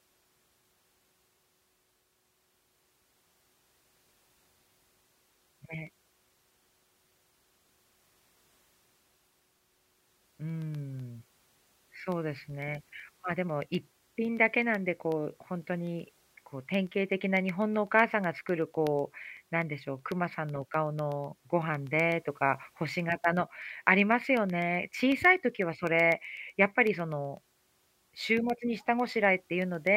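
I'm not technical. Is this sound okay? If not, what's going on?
No. From 0.12 s to 29.87 s there are periodic USB or driver dropouts: eight times a second, a tiny sliver of speech, well under a millisecond, is replaced by silence. That makes a couple of hundred evenly spaced ticks, audible only while someone is talking.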